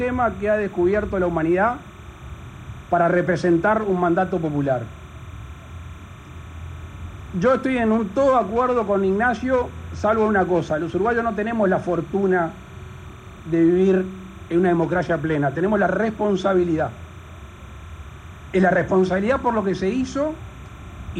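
Timecode bleed runs from start to finish. A linear timecode signal has leaked in from a neighbouring track or cable. That code is a square wave flipping between two pitches, here around 1 kHz and 2 kHz. It repeats at 30 frames per second, giving a fast, regular rhythm. The result is a steady chirping warble sitting behind the sound. It stays roughly 25 dB below the main signal, so it is quiet but never stops.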